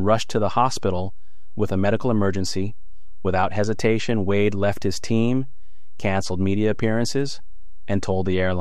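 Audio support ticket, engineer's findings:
DC offset, whole clip. Waveform sits shifted from zero by a constant of about -23 dBFS. Inaudible as such; shows as steady energy at 0 Hz and costs headroom on one polarity. Probable component: capture or conversion stage without DC blocking.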